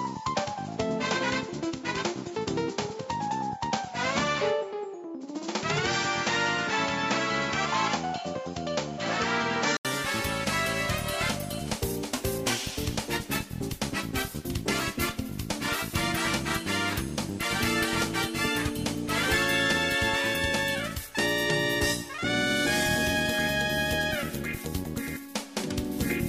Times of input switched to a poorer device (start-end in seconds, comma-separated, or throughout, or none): 0.00-9.85